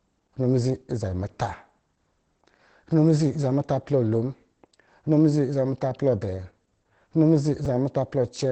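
Opus voice compression runs through the whole speech clip. Nothing sounds above 8.6 kHz, which fits SILK coding in wideband mode at around 12 kbps. The coarsely coded excitation leaves the voice plainly muffled and hoarse, with a faintly robotic edge.

At 7.65 s, chunks are out of order. A 5.33 ms chunk plays one chunk late, after the audio that should follow it. The wrong order and the three hard joins it creates are heard as a brief jumbled moment.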